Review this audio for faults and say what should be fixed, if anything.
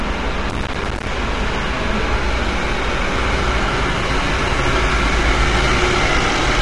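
The encoder was likely a low-delay AAC codec, the AAC-ELD type used for video calls, running at a low bitrate, with the grain pointing to something near 32 kbps. Its short frames cannot resolve fine tonal detail, so noise fills the spaces between components. Across the whole clip the sounds come out rough and grainy, and nothing is present above 11.6 kHz, which leaves the top dull. To prevent this low-delay AAC compression damage, encode at a higher bitrate or use a codec with longer frames when delay does not matter.

From 0.50 to 1.07 s the processor could not finish its audio buffers in time and missed deadline after deadline, around fifty of them. The size of each dropout fits buffers of about 5 ms. Each missed buffer was output as silence with hard edges, so that stretch of sound is torn by a dense burst of crackle, a gritty chopping that ends once the load passes. To prevent processor overload crackle, free up CPU for the audio thread or use a larger buffer size.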